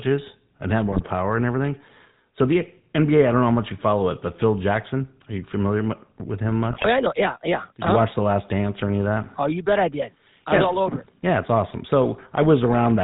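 Throughout the speech, the GSM full-rate codec is plainly audible: a buzzy, gravelly roughness from the pulse-driven vocal-tract model, consistent with a 13 kbps coder. A spectrogram shows nothing above 4 kHz and smeared, coarse harmonics.

GSM bit errors strike from 0.92 to 1.06 s, between "and have" and "and everything", and again from 6.71 to 6.87 s. Corrupted filter, pitch and gain values across several frames produce squawks, pops and gargling. The spectrogram shows distorted, blotchy frames, worse in the second burst.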